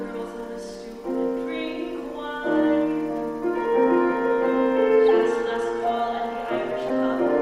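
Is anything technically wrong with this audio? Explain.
Yes, there are two problems.

Timecode bleed runs through the whole clip. Linear timecode from an adjacent track or cable has leaked into the audio path. That code is a square wave flipping between two pitches, here close to 1 kHz and 2 kHz, and its bit pattern repeats at 25 frames per second. The result is a steady, chirping warble sitting behind the sound, faint at roughly 40 dB below it but constantly present.

Corrupt frame decoded faults occur at 5.09 s and again from 6.89 to 6.93 s. In each case flipped bits inside the compressed stream went unnoticed, and the decoder rendered the damaged data as if it were valid, placing energy at frequencies and gains that don't belong there. The first error spans what sounds like a couple of frames, the second a few. Each is heard as a short chirpy burst peaking around -20 dBFS.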